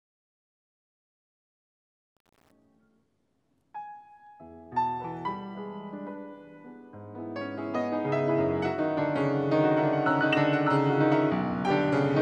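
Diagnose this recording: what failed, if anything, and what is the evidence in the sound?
The fade-in from the start to 2.51 s sounds gritty, worst through about 2.33 s, before the level settles. This is truncation distortion on a fade. At the sample-format conversion stage, the fade was rendered without dither at a coarse word length that fits 8 bits, so the quiet waveform collapses into a few square steps.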